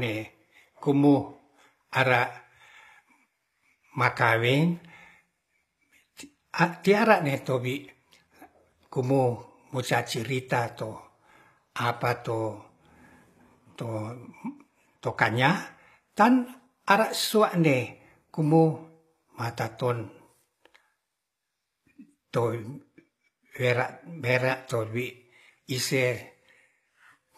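Right through the speech you can hear what's likely HE-AAC compression, around a 24 kbps rate by the sound: the treble is rebuilt from lower bands, so s sounds come out gritty and lispy.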